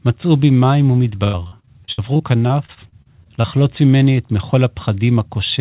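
From 1.24 s to 3.45 s there's repeated packet loss, the robotic-sound kind. Chunks keep going missing, the longest about 93 ms, and each hole gets patched by stretching the previous sound, so about a quarter of that stretch comes out choppy, all capped around 4 kHz by the narrowband call path.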